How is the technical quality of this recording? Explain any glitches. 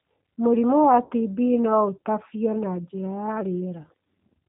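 The recording has clear low-bitrate codec damage throughout, plus one brief dropout early on.

G.729 codec: The whole clip passed through a G.729 speech codec, and the sound fits an 8 kbit/s stream. Speech is rebuilt from a vocal-tract model and a few pulses per frame, with nothing above 4 kHz, so it sounds band-limited, slightly rough and synthetic.

VoIP packet loss concealed by the speech codec: From 1.05 to 1.11 s, about 60 ms of audio went missing in transit. The decoder filled the gap by extending its last pitch and filter settings at falling gain, leaving a short smeared stretch that sounds weak before the speech recovers.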